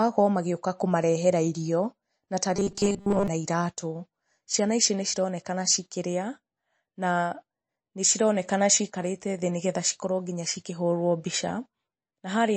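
This speech clip has MP3 compression damage throughout. Quiet detail flickers with a watery swirl, and s sounds turn metallic. This is plainly audible and likely comes from a low bitrate, fitting roughly 33 kbps. Just after "na ta", from 2.56 to 3.28 s, there is robotic sound from repeated short buffers. The sound becomes a rigid metallic buzz at 200 Hz. That fits a 5 ms chunk being replayed, likely because new audio arrived too late. Most of the sound in that span is repeats.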